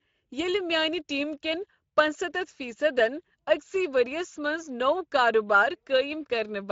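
Speex codec damage runs throughout the speech, plainly audible. The speech sounds noisy and hoarse because too few bits are left to code the excitation, which fits a middle-rate Speex setting near 17 kbps.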